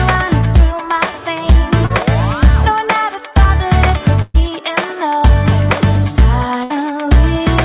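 At 1.86 to 1.92 s there is a short concealed packet loss. About 40 ms of audio never arrived in time, and the receiver filled 37 ms by extending the preceding sound, either from its pitch or as shaped noise, before blending back. It is heard as a brief smear or wobble. On a spectrogram, the harmonics or noise texture just before the gap are stretched and smoothed across it. The waveform shows a repeated cycle, or a noise-like stretch, in place of changing detail.

Two bursts of packet loss follow, at 4.22 to 4.36 s and 6.64 to 6.72 s. The receiver filled 124 ms and 57 ms by continuing the last sound while fading it, so each becomes a held buzz or a decaying hiss. About 120 ms and 60 ms of real audio are skipped. On a spectrogram, frozen harmonics or flat noise fade before the audio resumes further on. The waveform shows a tapering envelope, then an abrupt change.

Throughout the clip, nothing reaches above 4 kHz, which fits a G.711 mu-law call path at 64 kbps.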